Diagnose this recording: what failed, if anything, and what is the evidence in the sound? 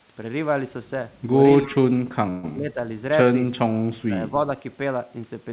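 Feedback whistle, acoustic loop in the room. From 1.17 s to the end there's a thin, steady tone at about 5.8 kHz, sitting roughly 15 dB under the speech and swelling and fading slowly in level. That's likely the loudspeaker-to-mic loop hovering right at the edge of feedback: one frequency has enough loop gain to keep ringing but not quite enough to run away and howl, so it just hangs there behind everything.

Speech suppressed in double talk, call processing. The talker ducks from 1.65 to 2.78 s and again from 3.81 to 4.32 s. It drops by around 20 dB at worst and thins out or breaks up for a bit under a second in the first stretch and under half a second in the second. The likely cause is the echo canceller. With both ends talking, it couldn't tell the near voice from the loudspeaker echo, so it clamped down on both.

Call audio freeze, network and jitter buffer. Inside that first ducked stretch, from 2.30 to 2.45 s, the speech stalls and the last bit of sound is stretched out for 132 ms before things carry on. 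Nothing is actually lost; the audio just resumes where it stopped, now 132 ms later. That's the signature of packets likely arriving late, the jitter buffer running dry, and the receiver filling the wait instead of dropping content.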